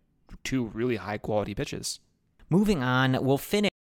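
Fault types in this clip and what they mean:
Cut-off end: The speech stops abruptly at about 3.69 s, mid-sound, and falls straight to digital silence with no natural decay or room tail, leaving roughly a quarter of a second of dead air before the clip ends. The sudden stop happens because the final stretch of audio in the playback or recording chain was never written out, so the signal is truncated rather than allowed to finish and fade.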